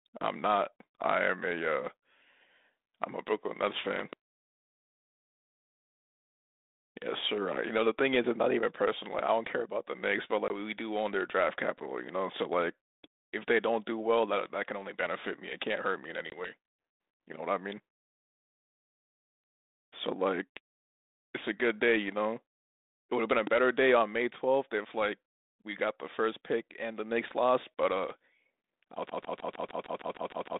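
At 3.99–4.15 s a loud pop arrives as two sharp thumps, roughly 15 dB above the speech, which continues underneath. A likely voltage pulse, from a plug, switch or static discharge, is the cause. On a waveform it shows as tall spikes, and on a spectrogram as thin vertical lines spanning all frequencies.

At 10.48–10.51 s and again at 16.30–16.52 s, packet loss on the ADPCM call cuts 20 ms of audio to hard-edged silence. The speech then resumes with some distortion, because the decoder's prediction and step size have drifted from the sender's. Each gap appears as a blank vertical strip, followed by a brief smear as the decoder recovers, all within the narrow telephone band that fits 32 kbit/s G.726.

At 23.47–23.49 s a single loud pop, about 10 dB above the signal, appears as one isolated spike and a full-height line.

From 29.10 s to the end, a broken-record loop repeats a 154 ms fragment ten times back to back, likely from a stalled stream resending its last buffer. 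The waveform shows an identical repeating block, and the spectrogram shows a regularly tiled pattern.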